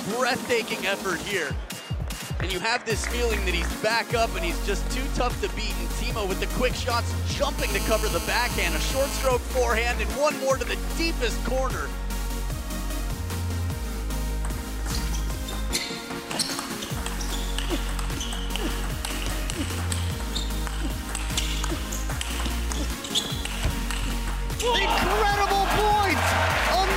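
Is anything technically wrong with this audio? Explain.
Yes, two kinds of mobile-phone interference are audible.

From 7.59 to 9.28 s there is GSM phone buzz. A 2G handset on a call transmits bursts about 217 times a second, and the audio circuitry rectifies them into a hard, raspy 217 Hz buzz about 8 dB below the signal. On a spectrogram it shows as a dense ladder of evenly spaced harmonics.

From 25.71 to 26.76 s, GSM signalling bursts appear: short groups of rectified radio bursts, roughly 10 dB below the signal, giving a galloping dit-dit-dit of ticks and brief 217 Hz buzzes. The waveform shows clustered spiky packets separated by gaps.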